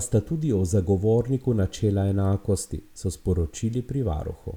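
Nothing stood out on listening to this recording of speech.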